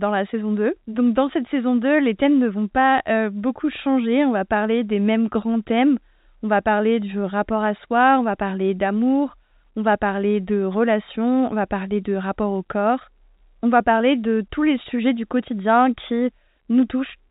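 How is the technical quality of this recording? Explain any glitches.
The technical quality of this speech recording holds up, with no glitches to explain, and its narrow telephone sound points to standard G.711 telephone coding.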